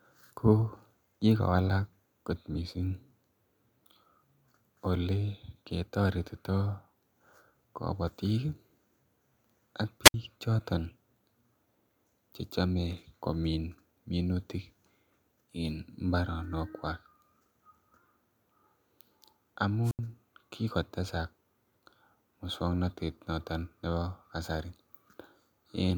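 At 10.03–10.14 s and 19.84–19.99 s, wireless microphone squelch dropouts: fading RF trips the receiver squelch, giving a hiss rise then about 64 ms and 80 ms of silence.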